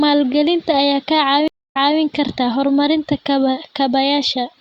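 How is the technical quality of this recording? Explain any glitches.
The recording has one clear glitch, a stream reconnect from 1.48 s to 1.99 s. The connection dropped, leaving about 248 ms of silence, and a fresh decoder picked the speech up 0.26 s earlier than where it broke off, so a short stretch is heard twice. That repeat tells it apart from a plain dropout, which would lose material instead of replaying it.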